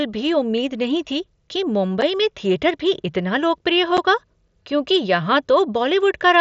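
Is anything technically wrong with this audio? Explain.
Yes. Unconcealed Bluetooth headset packet loss occurs at 2.01 s, between "उम्मीद नहीं थी कि" and "में थिएटर", and again at 3.97 s. Each time about 7.5 ms of audio, consistent with a single lost packet, went missing between headset and phone over the wideband mSBC link. Silence or an idle pattern filled the gap, leaving a tiny hole with abrupt edges.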